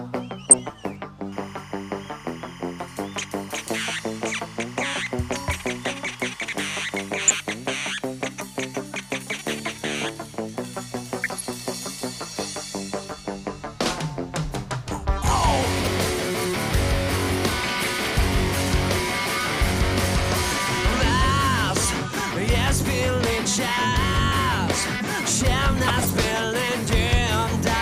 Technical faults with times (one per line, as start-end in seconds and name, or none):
0.44-0.71 DAB burbling
1.32-7.09 timecode bleed
7.28-7.35 DAB burbling
11.24-11.41 DAB burbling
15.78-15.89 DAB burbling
18.98-19.00 DAB burbling
25.88-26.14 DAB burbling